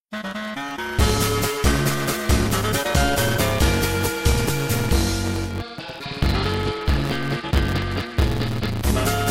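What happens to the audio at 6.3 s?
At 6.3 s the audio is inside a digital radio blend to analogue, running from 5.45 s to 8.92 s. The receiver has lost the digital stream and faded over about 179 ms to the AM broadcast of the same station. The level drops by about 1 dB, and hiss appears roughly 35 dB under the signal. The added hiss and the fade in and back out distinguish it from a plain low-pass filter.

A block size mismatch (truncated) also runs through this point and the whole clip. One stage writes longer blocks than the next reads, which fits 512-sample blocks losing their tails. The result is a 138 Hz buzz and playback 1.6 times too fast with pitch left normal, unlike a simple speed-up, which would raise the pitch.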